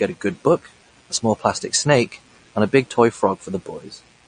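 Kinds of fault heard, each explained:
Mains buzz: A steady, raspy buzz sits under the speech for the whole clip. It's built on 60 Hz, so it comes from a 60 Hz mains supply, with sharp spikes getting in twice per cycle. That happens when a dimmer, a rectifier or a missing shield lets switching noise into the chain, and the spikes throw off harmonics well up into the kilohertz range. Here it runs roughly 40 dB below the speech, low but always there.
MP3 compression: The speech has a plainly audible watery, swirly quality. That fits MP3 at a low rate, around 40 kbps. When the encoder runs short of bits it drops weak frequency lines, and those lines flicker on and off from frame to frame, which gives that swirl and smears the edges of sounds. Nothing comes through above about 9.6 kHz, the fixed treble cutoff you'd expect from a starved encoder. That's the likely cause.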